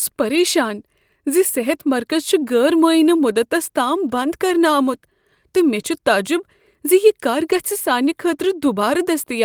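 At 0.35 to 0.41 s and again at 7.51 to 7.53 s, speech turns briefly rough and noisy with no gap: a lost packet rebuilt from error correction. The next packet carried a coarse low-bitrate copy of the missing audio, and the decoder played it. The first repair spans about 40 ms, consistent with two lost packets, and the second about 20 ms, consistent with one. Unlike ordinary loss concealment, nothing drops out or smears into a buzzy stretch; the sound stays continuous but grainier.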